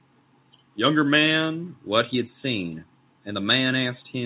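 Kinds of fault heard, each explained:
No kinds of fault are heard in this speech.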